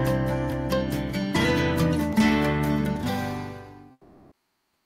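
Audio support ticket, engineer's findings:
Comfort noise in place of the background, 3.91 s to the end of the clip, about 0.95 s. Real background swapped for smoother synthetic noise. Level shifts by about 7 dB. Background sits about 49 dB below the loudest passages. Likely Opus DTX: sender stops transmitting once its voice detector hears no speech. Receiver fills the gap with generated noise shaped like the background.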